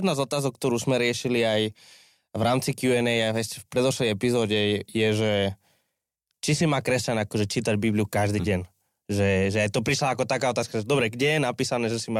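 Speech recording, no audible technical faults anywhere in the clip.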